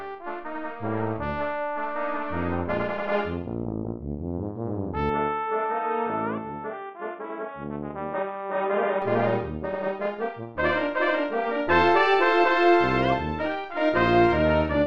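From 5.10 to 9.02 s, likely an input switched to a poorer device: sound turns dull, nothing above 3.8 kHz, faint added noise, no gap.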